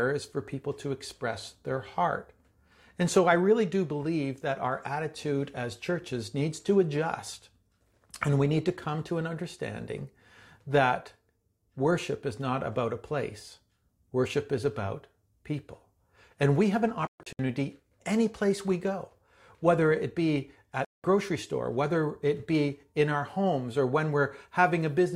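At 17.07 s the receiver stops getting good frames and mutes, a digital broadcast dropout. The speech breaks into several short holes across about 0.32 s, the longest 128 ms. At 20.85 s a second dropout silences 192 ms outright, and that speech is lost.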